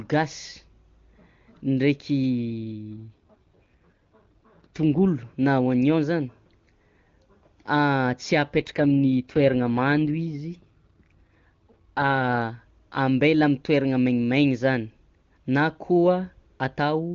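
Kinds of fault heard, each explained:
AMR rate drop: at 2.70–5.06 s and 8.53–12.41 s the speech turns rough and synthetic with the same band, like the codec stepping down to 8.85 kbit/s.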